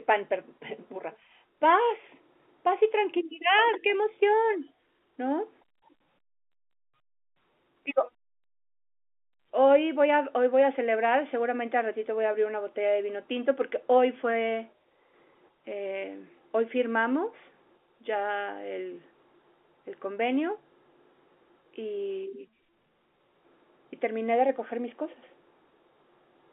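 No technical faults are audible.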